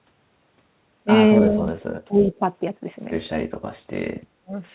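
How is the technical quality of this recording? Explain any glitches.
The recording has three short dropouts and one faint echo. It is narrowband, with nothing above 4 kHz, which fits G.711 mu-law telephone coding at 64 kbps.

Speech suppressed in double talk occurs at 1.38 to 1.81 s, 2.08 to 2.41 s and 4.42 to 4.52 s. The speech dips by roughly 20, 15 and 30 dB. The likely cause is the echo canceller ducking everything while both sides talked.

An echo leak runs from 2.23 to 2.39 s. A faint copy of the speech follows 260 ms late, about 20 dB below it, likely where the echo canceller failed to remove the loudspeaker pickup.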